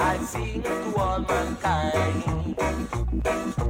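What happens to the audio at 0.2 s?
Nothing goes wrong at 0.2 s; the audio plays through that moment intact, with no dropout, click or distortion.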